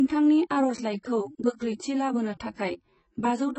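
Throughout the speech, the sound is dull and smeared, with nothing above 8.1 kHz and heavy codec damage that warbles and fizzes on sustained sounds and sibilants. The likely cause is AAC compression, with the damage pointing to AAC-LC coded at around 16 kbps.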